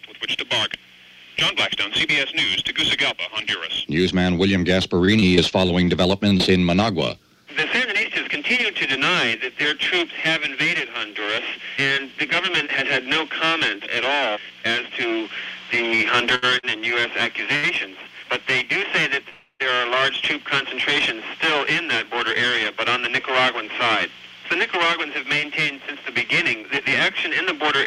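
From 5.05 to 6.41 s the sound turns choppy as short fragments drop out. This is repeated packet loss: eight separate holes open across the stretch, none longer than 24 ms. Each one is patched by extending the preceding sound, which covers about 12% of the span with 161 ms of filler, yet around 100 ms of real audio is gone for good.

Between 16.35 and 17.65 s the audio drags and stutters three times, with the longest hitch lasting 72 ms. These are repeated stalls. Packets arrived late, so the jitter buffer emptied each time and the receiver stretched the last sound until data caught up, filling 188 ms in all. Because playback resumed where it paused, nothing is actually lost; the material is just pushed later.

At 19.29 s the sound locks into a sustained buzz or hiss that fades, reaching about 50 ms of silence before the audio picks up again at 19.62 s, intact but delayed. This is a call audio freeze. 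The likely cause is packets held up in transit, emptying the buffer so the receiver had to continue the last sound for 306 ms. That inserts a gap of the same length without dropping any content.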